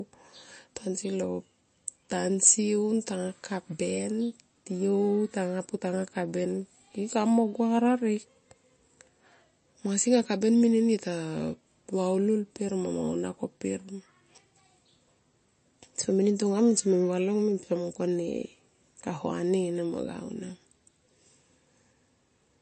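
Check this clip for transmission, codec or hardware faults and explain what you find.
One codec fault runs through the whole clip. Nothing is heard above 8.3 kHz, and the speech sounds plainly watery and swirly. This is likely MP3 compression. The encoder starves weak bands and cuts the treble, which fits a bitrate of about 33 kbps.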